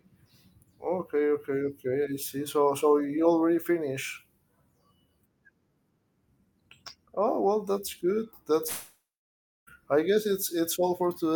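At 8.67 s the speech gives way to a fading buzz that decays into about 0.64 s of silence, then resumes at 9.69 s with 1 s of material skipped. This is likely a long network dropout, concealed by extending the last sound.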